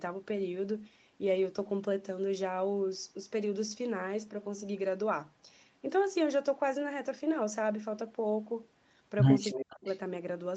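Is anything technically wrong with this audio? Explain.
Yes, there are two problems, both bunched near the very end of the clip.

From 9.5 to 9.98 s there's an echo leak: a faint, delayed copy of the speech trailing the original by about 315 ms, sitting roughly 20 dB below it. That pattern points to the likely cause being a far end on loudspeaker whose echo canceller didn't fully scrub what its mic picked up, so a weak ghost of the talker got sent back down the line.

Overlapping that, from 9.53 to 9.87 s, you get speech suppressed in double talk. The talker's level collapses hard, at worst by something like 35 dB, with the speech affected over roughly 300 ms. The likely cause is both sides making sound at once: the echo canceller couldn't tell the live talker from the returning echo, so it ducked everything together, pulling the speech down right where the echo shows up.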